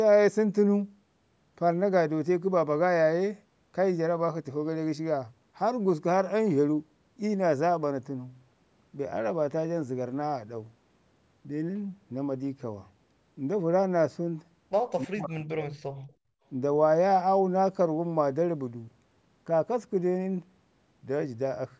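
From 15.03 to 16.02 s, the speech sinks by roughly 40 dB for about a second. This is speech suppressed in double talk, likely caused by an echo canceller misreading overlapping talk. From 16.3 to 16.44 s, the room sound drops by about 24 dB. The background is gated by the echo canceller while the loudspeaker plays, then recovers.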